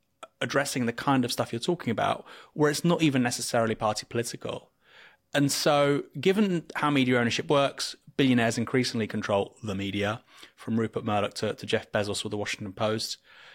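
No technical fault can be heard anywhere in the speech recording, and the signal stays steady and continuous throughout.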